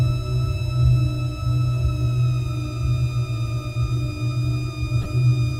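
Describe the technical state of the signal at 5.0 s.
A corrupt frame was decoded from 5.02 to 5.06 s. Damaged bits in roughly two compressed frames were played anyway, so misread data put energy at wrong frequencies. The result is a brief chirp-like burst, peaking around -15 dBFS.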